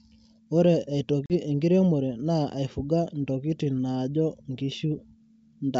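At 1.26–1.33 s, packet loss on an ADPCM call over G.722 drops a couple of packets, about 40 ms, into silence: a hard-edged flat gap in the waveform and spectrogram, then slightly distorted speech as the decoder's predictor resynchronises.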